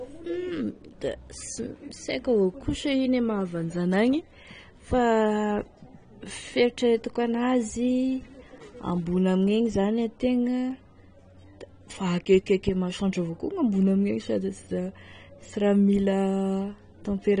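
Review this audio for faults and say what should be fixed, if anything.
The speech sounds dull and smeared throughout, with nothing above 9.7 kHz and a fizzy edge on sibilants, likely AAC compression at a low bitrate around 32 kbps. Export from the original at a higher bitrate, or keep an uncompressed copy for editing.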